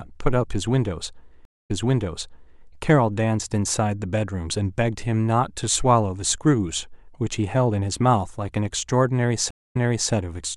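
Two stream reconnects occur. At 1.45 to 2.61 s, the speech drops out for about 240 ms, then resumes 0.91 s earlier. At 9.51 to 10.12 s, a similar 250 ms gap is followed by 0.37 s of repeated speech. Each gap appears as a blank vertical band, then a brief fade-in as the new decoder starts.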